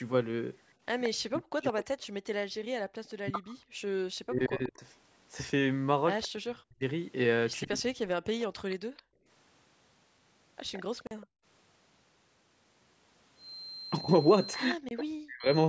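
From 1.03 to 11.27 s there is an echo leak. A faint copy of the speech trails the original by 173 ms. It sits around 20 dB below the main speech. The likely cause is a loudspeaker on the far side whose echo canceller left part of the pickup in place. That residue was sent back down the line.

From 1.14 to 9.0 s the speech is suppressed in double talk. The talker's level sinks in patches while the echo is also present, by as much as around 40 dB. Altogether about four seconds are affected. The level dips, the top end goes dull, and some stretches drop out. This is likely an echo canceller that could not separate local speech from returning echo, so it turned both down.

From 2.51 to 2.94 s the background is gated by the echo canceller. The room tone falls by about 40 dB for roughly 0.2 s within that span, then comes back. The canceller clamped the microphone while it judged echo to be playing.

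From 11.07 to 11.11 s comes a block of digital silence, 40 ms long. The sound stops dead and restarts with no fade, leaving a short hole. An output buffer that was not filled in time would produce this.

From 11.27 to 11.45 s the background is gated by the echo canceller again. There is another drop of about 40 dB, lasting roughly 0.2 s.

Near the end the pattern returns in a tight cluster. A brief echo leak appears from 14.69 to 14.73 s, with the same 173 ms delay. It is likely from the same loudspeaker path. From 14.75 to 15.48 s the speech is again suppressed in double talk, for roughly 0.7 s and by up to around 40 dB. Inside that, from 14.89 to 14.91 s, a second block of digital silence cuts in for 24 ms. It is heard as a short gap.

Throughout, the sound has nothing above 8 kHz, as set by the call's microphone processing.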